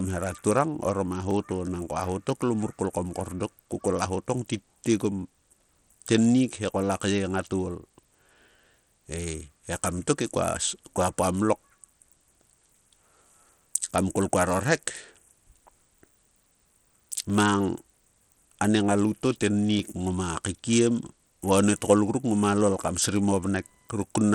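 From the start and throughout the speech, the sound has plainly audible damage that is likely Bluetooth SBC compression, at a data rate that fits roughly 80 kbps. SBC splits the signal into a few wide frequency bands and hands out bits without any model of hearing. At this rate the upper bands are starved and everything is coarsely quantised, so the treble flickers, and a gritty, aliased haze sits on the speech.

At 1.31 s, just after "hera turang orom a" and before "to nangko aho to", a single sharp click is heard. It recurs at 17.30 s and at 19.79 s, the last between "a nie ngalout to" and "ngoma kaikiem va". These are likely dropped samples: well under a millisecond of the stream goes missing, so the waveform jumps abruptly to a later value. Nothing audible is lost, only a thin, instantaneous tick.

From 21.67 s, right after "ngoma kaikiem va", to the end at 24.34 s, computer activity noise appears. 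This is a fine buzzy chirp pulsing at around 1 kHz, about 40 dB below the speech. It follows the machine's processing load rather than the talker, because shifts in that load disturb the ground shared with the audio circuitry.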